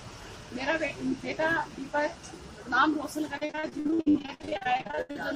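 From 3.37 to 5.17 s there's repeated packet loss (robotic sound): about 30 short dropouts, the longest 77 ms, each patched by stretching the last bit, so it goes choppy.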